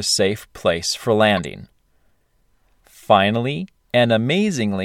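At 1.37 to 1.41 s, after "safe place for", a corrupt frame decoded: misread bits across a few frames scatter energy into a burst near -15 dBFS.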